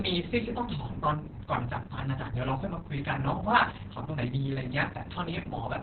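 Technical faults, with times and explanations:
Throughout, Opus voice compression: The speech is confined to narrowband, with nothing above 4 kHz, so it sounds muffled. The SILK coder's coarse excitation makes it hoarse and slightly robotic. The heavy damage fits a rate near 6 kbps with long 60 ms frames.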